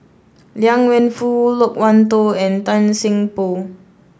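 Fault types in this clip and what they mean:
Listening through the speech, nothing stood out as a technical problem.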